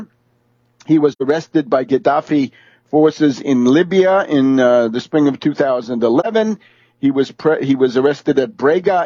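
A soft-edged hole in the sound opens at 1.12 s and closes by 1.22 s, and a shorter dip follows from 6.20 to 6.26 s. Both are AAC frame loss with muting: the decoder zeroed missing frames, about 85 ms (two frames) then about 43 ms (one), and overlapping windows faded the gaps in and out.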